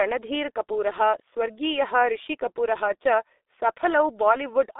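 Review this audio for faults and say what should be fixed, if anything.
The speech carries G.723.1 codec damage throughout. Nothing reaches above about 3.6 kHz or below 300 Hz, so it sounds muffled. Heavy coding at a rate that fits about 6 kbit/s blurs consonants and adds hoarseness, because the voice model updates slowly across long frames. To prevent it, record or transmit through a wideband codec at a higher bitrate instead.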